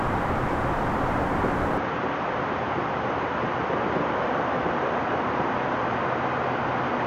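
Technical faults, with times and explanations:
1.78 s to the end, input switched to a poorer device: with no gap, the sound turns dull, drops about 5 dB and gains a faint noise floor around 40 dB down. The spectrogram shows everything above 6.8 kHz cut abruptly, likely from a narrower-band microphone.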